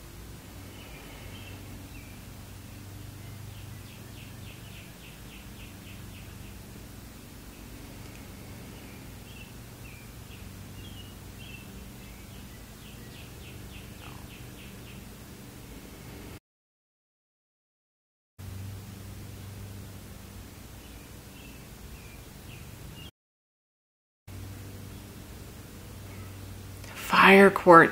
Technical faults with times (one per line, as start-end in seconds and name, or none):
16.37-18.39 playback stall
23.09-24.28 playback stall